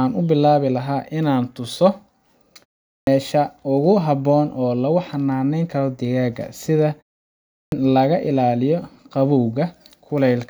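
The output device drops into a sleep state during short silences and needs time to wake before it passes sound again. This causes a clipped start after a pause at 2.88 s, following a 0.31 s gap, where about 190 ms is swallowed, and again at 7.54 s, after a 0.6 s gap, with about 180 ms lost. Each time, the speech bursts in abruptly from silence with its opening sounds missing.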